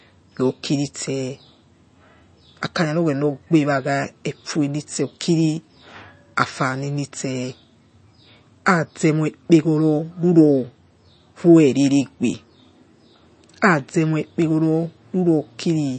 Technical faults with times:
0.00-15.98 MP3 compression

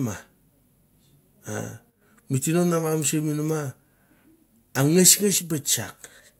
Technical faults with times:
1.90-2.02 one channel drops out
5.38-5.50 one channel drops out

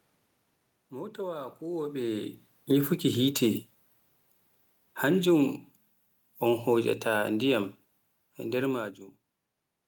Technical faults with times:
6.41-7.75 automatic gain falling

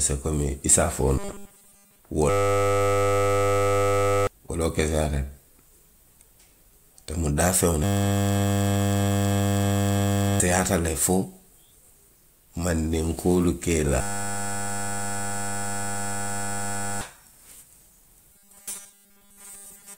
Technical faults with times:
1.18-1.99 robotic sound from repeated short buffers
2.30-4.27 system hang loop
7.84-10.40 system hang loop
14.01-17.01 system hang loop
18.33-19.98 robotic sound from repeated short buffers

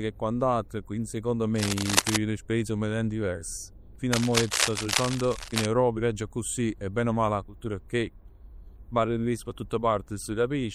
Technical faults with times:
0.00-10.75 MP3 compression
1.55-2.17 cable scratch noise
4.13-5.66 cable scratch noise

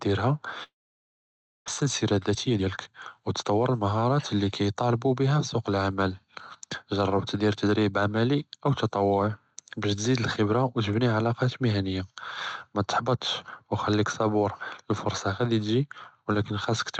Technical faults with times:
0.00-17.00 sample clock jitter
0.63-1.70 long network dropout
1.83-4.19 jitter buffer speed-up

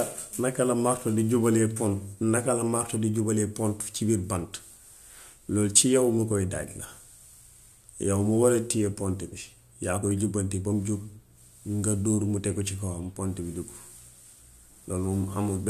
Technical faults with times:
none

